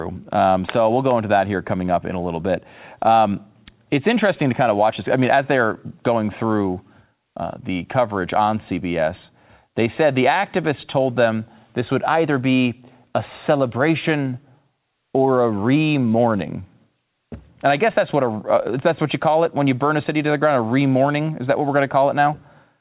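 Nothing stood out on listening to this speech as it came through the call path, whose G.711 A-law coding leaves nothing above 4 kHz.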